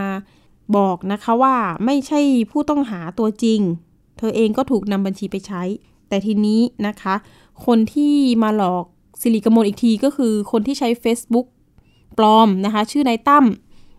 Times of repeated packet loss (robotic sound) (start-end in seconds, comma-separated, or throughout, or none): none